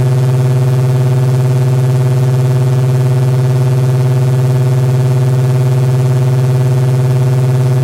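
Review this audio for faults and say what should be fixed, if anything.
Nothing in this recording of sounds needs fixing. There is no fault here to trace or prevent.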